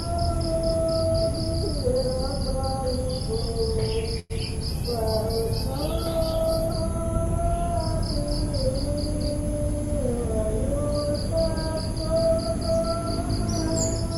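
From 4.19 to 4.32 s a brief fading buzz fills in, then the sound resumes intact: a call audio freeze, likely from an emptied jitter buffer.

From 4.68 to 6.80 s the sound turns coarse and muffled: a call bitrate drop, with the encoder squeezed from 128 to 17 kbps.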